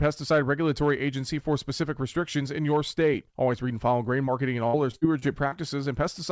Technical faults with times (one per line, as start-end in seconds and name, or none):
4.26-4.29 short concealed packet loss
4.67-5.54 repeated packet loss (robotic sound)